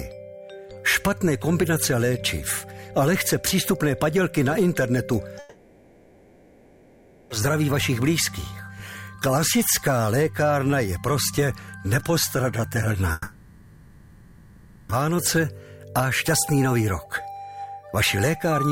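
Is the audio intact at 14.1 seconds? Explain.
No. A long network dropout runs from 13.12 to 14.90 s, likely from audio ceasing to arrive. For the whole 1.77 s, the receiver stretches the last sound into a fading buzz or hiss, then resumes later, with the missing portion gone.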